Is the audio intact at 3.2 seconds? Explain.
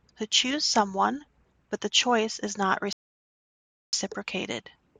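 No. A rebuffering stall runs from 2.93 s to 3.93 s, so 3.2 s falls inside a gap of pure silence. Right after "the choice is not", playback drained its store of downloaded audio and halted until more data came in, then picked up at exactly the point where it stopped. Nothing is skipped or repeated, but about 1.0 s of dead air is inserted mid-sentence, stretching the clip rather than damaging the sound itself.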